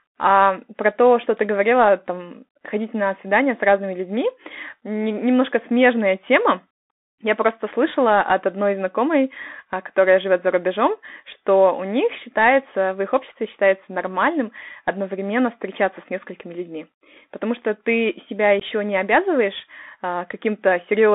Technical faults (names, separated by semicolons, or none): Bluetooth CVSD headset codec; unconcealed Bluetooth headset packet loss